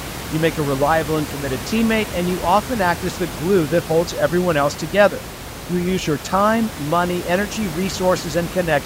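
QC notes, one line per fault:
Nothing to flag here, since the speech comes through without any system faults, and the room noise in the background, sitting about 11 dB below the voice, is just part of the recording space.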